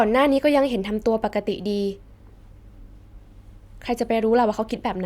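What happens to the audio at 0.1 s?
Nothing goes wrong at 0.1 s; the speech plays through that moment intact, with no dropout, click or other fault.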